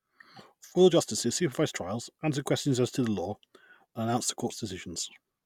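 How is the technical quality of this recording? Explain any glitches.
Listening closely to the recording, nothing stood out as a technical glitch at any point.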